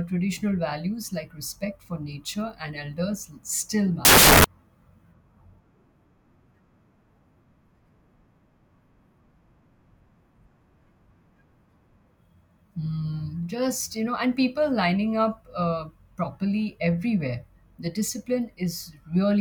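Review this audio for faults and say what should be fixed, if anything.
From 4.05 to 4.44 s, just after "nature and elders still", samples built from the wrong bytes scramble the speech into loud, harsh broadband noise for about 0.4 s. Fix the reader's byte order and alignment so each sample is assembled from its correct bytes.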